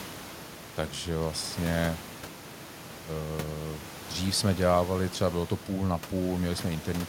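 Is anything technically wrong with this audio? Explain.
No, nothing in this speech recording points to a technical fault in the system. The background noise of the room where the microphone sits can be heard about 17 dB below the speech, which is part of the recording itself.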